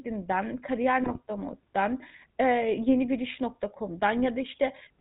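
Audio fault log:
Throughout, GSM full-rate codec: the speech has a plainly audible buzzy, gravelly roughness and nothing above 4 kHz, which fits a 13 kbps GSM full-rate stream. The codec rebuilds the voice from a vocal-tract filter driven by sparse, regularly spaced pulses, discarding most excitation detail.
1.04–1.20 s, GSM bit errors: for about 0.16 s the speech breaks into squawks, pops and gargling. Corrupted bits, consistent with an error rate near 1.3 percent across roughly eight 20 ms frames, scrambled filter, pitch and gain values, distorting the spectrum and spiking the level.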